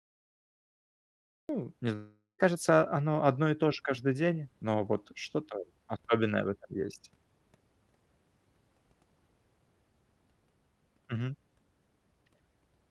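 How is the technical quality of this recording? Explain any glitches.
Two glitches mark the opening seconds: a cut-off start and a long network dropout shortly after. The audio has passed through a WebRTC call path using Opus at 32 kbps, which fits its top end stopping near 12 kHz.

Cut-off start, 0 to 1.49 s: capture began late, so the first 1.49 s is digital silence and the speech enters abruptly at 1.49 s, already mid-sound. Because the recording started partway into the utterance, there is no natural onset or fade-in, just a hard jump from nothing into speech.

Long network dropout, 1.95 to 2.41 s: the gap is likely caused by packets failing to arrive for about 440 ms. The receiver covers roughly 430 ms of that by extending the last sound as a buzzy, fading tone, which then gives way to a brief stretch of silence. Speech returns at 2.41 s, but the audio lost during the gap is never recovered, so a short piece of the speech is missing.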